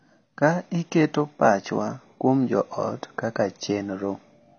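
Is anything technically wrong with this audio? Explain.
Yes. Throughout the speech nothing survives above 6.6 kHz, and the damage is plainly audible as a dull, smeared, warbling texture. This is likely AAC compression at a low bitrate, around 24 kbps, which trims the top band and quantises coarsely, unlike simple low-pass filtering, which would not warble.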